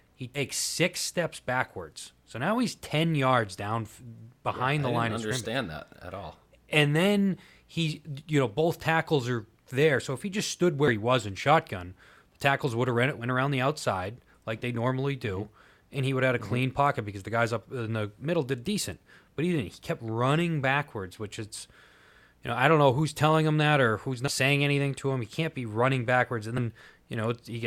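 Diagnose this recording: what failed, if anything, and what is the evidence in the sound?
Codec stage: compressed frames skipped. The speech jumps forward at 0.34–0.40 s, 3.99 s (between "yards down" and "behind yeah the line"), 10.87–10.90 s, 13.20–13.25 s, 24.27–24.32 s and 26.57 s. About 70 ms vanishes each time, roughly 150 ms at 24.27 s, which fits whole 10 ms frames lost in the file or rejected by the decoder. An underrun would leave silence or a hard click instead.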